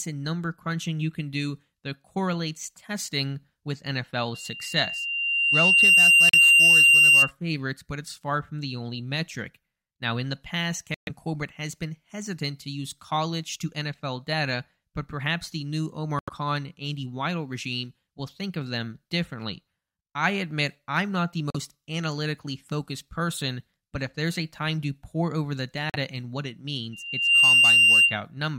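Speech recording with two episodes of loudspeaker feedback squeal and several dropouts from corrupt frames being muted. From 4.34 to 7.31 s a 2.8 kHz tone swells over roughly a second and a half until it sits well above the speech, around 15 dB louder. It returns from 26.93 to 28.21 s, just after "and what it", this time building in under half a second. Both times a microphone is hearing the loudspeaker it drives, and the loop gain at 2.8 kHz exceeds unity, so that tone sustains itself until the loop is broken. Separately, the audio drops abruptly to silence five times. The first is 6.29 to 6.35 s, inside the first squeal. Another runs from 10.94 to 11.10 s, just after "in the past". One runs from 16.19 to 16.30 s, after "but perhaps the new", followed by 21.50 to 21.56 s and 25.90 to 25.96 s. These gaps of about 60 to 160 ms are whole compressed frames that the decoder rejected as corrupt and replaced with silence. 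Their lengths fit frames of roughly 25 ms each. The timing of the surrounding audio is preserved.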